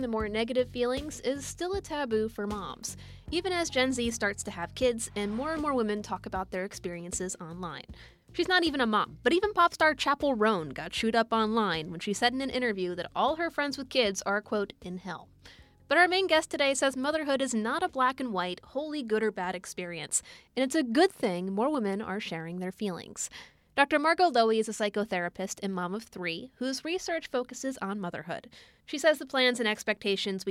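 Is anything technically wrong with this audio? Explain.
No, there are no technical faults to report here.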